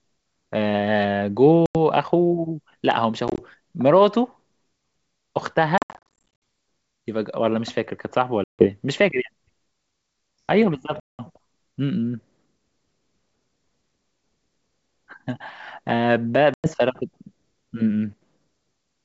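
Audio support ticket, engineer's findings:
Packet loss on an ADPCM call: dropped packets filled with silence, and the receiving decoder's predictor and step size desynchronise from the sender's. Hard-edged gaps in the speech at 1.66 s (90 ms), 3.28 s (60 ms lost in short bursts over 100 ms), 5.78 to 6.28 s (420 ms lost, choppy), 8.44 s (150 ms), 11.0 s (190 ms) and 16.54 s (100 ms). Each resumes slightly distorted before the G.722 wideband path recovers.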